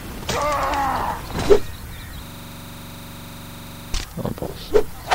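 A system hang loop takes over the sound from 2.26 s to 3.94 s. For that 1.7-second stretch, a single 42.67 ms slice of audio repeats exactly, about 39 times in a row, producing a rigid, rattling buzz at a loop rate of 23.4 Hz. The mechanism is a frozen computer or audio driver while the playback hardware kept cycling through the same ring buffer. The slice length fits a 2048-sample buffer.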